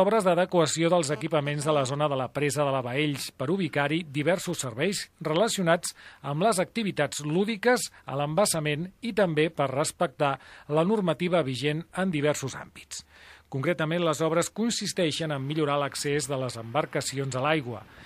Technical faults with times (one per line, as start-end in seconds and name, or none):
1.13-1.87 GSM phone buzz